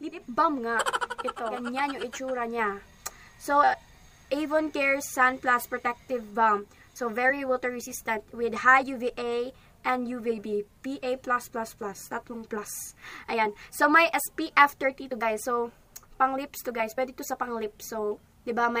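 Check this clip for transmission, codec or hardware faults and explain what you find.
No faults turn up anywhere in this clip.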